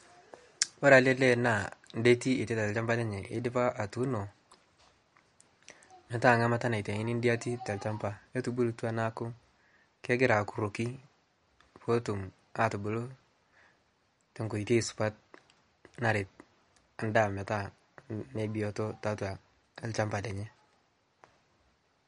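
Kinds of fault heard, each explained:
MP3 compression: The speech has nothing above 11.1 kHz, so s sounds lose their top. Quiet detail flickers in and out between frames, giving a plainly audible watery, swirly texture. The likely cause is MP3 coding starved of bits, fitting a bitrate near 48 kbps.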